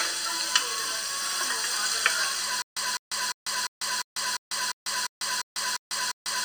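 A sound clip with a stutter with silent gaps from 2.62 s to the end: the same 204 ms fragment repeats eleven times, every 349 ms, with 146 ms of digital silence between. Unlike a simple dropout, the fragment repeats, and the missing audio is lost. The likely cause is a stalled stream replaying its last buffer.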